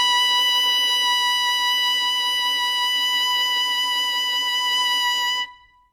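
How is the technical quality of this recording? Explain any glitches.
The music is technically compromised throughout by layered codec damage rather than by isolated glitches.

Transcoding between lossy codecs runs the whole clip: nothing sounds above 18.4 kHz, and smeared, watery highs mix with a second set of swirly artefacts. The likely cause is a low-bitrate WMA encode re-encoded as HE-AAC around 40 kbit/s, each pass compounding the last. A spectrogram shows a hard ceiling at 18.4 kHz and blotchy, patchy upper bands.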